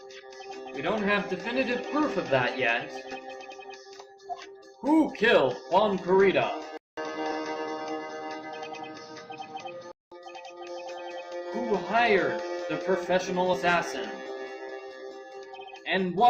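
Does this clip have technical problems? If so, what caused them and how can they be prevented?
Yes. Two kinds of fault are audible.

Compressed frames skipped: at 3.11 to 3.15 s, at 7.31 s and at 13.53 to 13.56 s the audio jumps forward. The first two jumps lose roughly one frame's worth, about 20 ms. The third loses roughly 70 ms, which fits about three of the 20 ms frames this stream appears to use. Prevention: deliver the file over a checksummed, retransmitting path and verify it before decoding, so that damaged or missing frames are replaced and not dropped.

Input switched to a poorer device: from 6.77 to 10.12 s the sound turns dull and boxy. Nothing is present above 6.3 kHz, the level shifts by about 5 dB, and a new noise floor sits roughly 30 dB below the signal. There is a silence of about 200 ms at the switch. The likely cause is the system changing its input mid-recording to a narrower-band microphone or a headset's call profile, then switching back. 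Prevention: lock the recording input to a fixed device and disable automatic device switching for the session.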